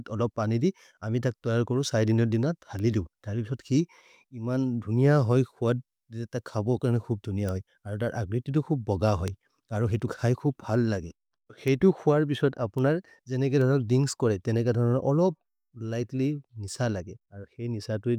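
Six bit error spikes punctuate the speech, at 2.79, 7.49, 9.28, 11.68, 12.78 and 13.61 s. Each comes from a single flipped bit in a stored or transmitted sample value. The waveform jumps by a power of two for one sample (three at 9.28 and 13.61 s), then snaps back. The result is a sharp broadband tick unrelated to the speech. The ticks reach about −15 dBFS at 7.49, 9.28 and 11.68 s, about −21 dBFS at 2.79 and 12.78 s, and about −27 dBFS at 13.61 s.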